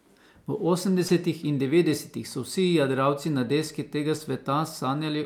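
At 1.07 s, just before "in devetdesetih so", there is a short concealed packet loss lasting until about 1.11 s. Roughly 20 ms of the speech arrived too late to decode, and the receiver papered over it by extending the preceding sound for about 21 ms before crossfading back. It is heard as a brief smear or wobble.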